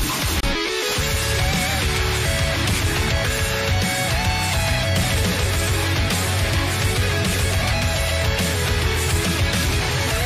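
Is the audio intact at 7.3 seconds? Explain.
Yes, at 7.3 seconds the audio plays through cleanly, with no break, dropout or other fault at that point.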